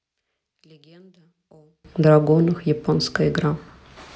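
From 0 to 1.85 s the speech nearly vanishes in mono, down about 35 dB, leaving a faint residue, likely one channel inverted cancelling the shared centre.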